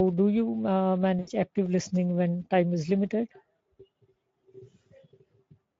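The speech runs through the Speex codec at a low bitrate, roughly consistent with about 16 kbps, so CELP excitation is starved and the voice sounds plainly hoarse and noisy throughout. From 1.19 to 1.30 s, VoIP packet loss concealed by the speech codec: about 80 ms of audio went missing, consistent with four lost 20 ms frames. The decoder extrapolates and fades, producing a stretched, fading stretch of sound that stays weak briefly afterwards.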